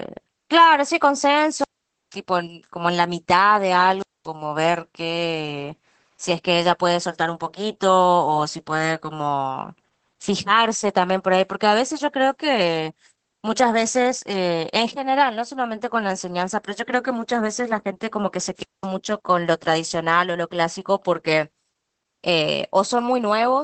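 It's a speech recording with two problems. The whole clip carries Opus voice compression damage, and you can plainly hear it. Nothing survives above about 8.5 kHz, so it's band-limited to wideband. The voice has that slightly muffled, hoarse, faintly robotic texture you get when the SILK linear-prediction coder is starved of bits and codes the excitation coarsely. It sounds consistent with a rate around 12 kbps. On top of that there are three wireless microphone squelch dropouts, at 1.55 to 2.19 s, 3.98 to 4.27 s and 18.56 to 18.89 s. In each one you get a quick swell of hiss as the FM radio link fades, then the receiver's squelch shuts the output. That leaves a hole of near silence about 0.48 s long in the first, and about 0.23 s and 0.21 s in the other two, before the voice comes back.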